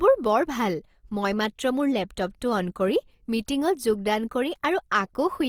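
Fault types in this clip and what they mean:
Opus compression: The speech sounds grainy and rough throughout, likely from Opus in its CELT mode at a rate that fits 24 kbps. On a spectrogram, bands stay filled rather than holed, with mottled noisy texture replacing clean harmonics, reaching 20.3 kHz.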